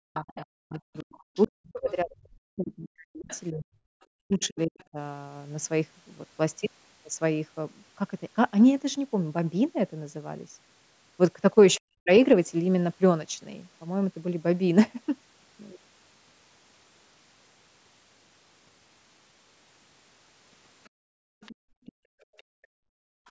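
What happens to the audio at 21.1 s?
Around 21.1 s the other side's voice is leaking through, from 20.84 to 22.43 s. It is a faint second voice, roughly 25 dB below the talker. The likely cause is the far end playing on a loudspeaker and the echo canceller leaving a residue in the microphone. Unlike crosstalk or a second person in the room, it is the other side's own voice coming back through the microphone.

Overlapping this, from 20.9 to 23.26 s the background is gated by the echo canceller. It clamps the microphone while the loudspeaker plays, so the room sound dips by up to about 38 dB, for roughly two seconds in all, and then comes back. A network dropout would instead cut everything, including the talker.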